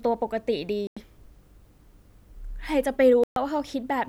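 At 0.87 to 0.97 s and again at 3.24 to 3.36 s the speech drops to silence for about 94 ms and 127 ms, then resumes. These gaps are likely Bluetooth stalls, where delayed radio packets let the headphone buffer empty before retransmissions arrived.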